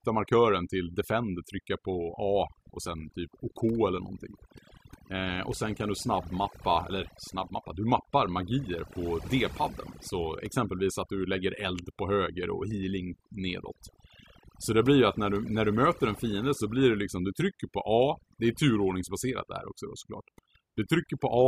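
Across the whole recording, overdone noise removal is at work: a noise reduction stage was pushed far too hard on a noisy source, so any frequency band sitting close to its noise estimate gets pulled right down or switched off, and the softer parts of the speech are cut along with the noise. The result is a background that drops and breaks up into twinkling specks.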